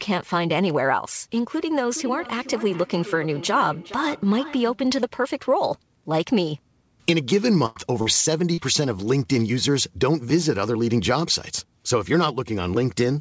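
From 1.9 to 4.88 s there's feedback echo between two devices: the speech comes back roughly every 0.4 s, peaking about 15 dB under the voice, thinner and ringier each pass. At 7.66 to 7.78 s a burst of packet loss drops about 100 ms; the receiver stretches the last sound and fades it out, then jumps ahead. Short concealed packet losses follow at 8.02 to 8.08 s and 8.54 to 8.59 s, each about 40 ms patched over, heard as brief smears. All of this rides on a call path whose top end stops at 8 kHz, which fits a wideband codec like G.722.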